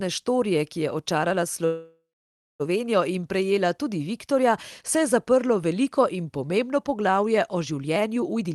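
A speech clip, heard over a call link whose band-limit near 12 kHz fits Opus. From 1.65 to 2.62 s, right after "štorije ki je očarala", there is a call audio freeze, likely from packets held up in transit. The last sound is stretched into a fading buzz or hiss that ends in about 0.58 s of silence, then speech resumes exactly where it stopped. Nothing is skipped, which sets it apart from a dropout. From 8.35 s to the end at 8.54 s, after "pomembno poglavje o življenju", a jitter buffer speed-up trims about a tenth of a second in pitch-period slices. The sound runs at 152% speed and seems hurried, but the pitch stays the same, unlike a simple resampling.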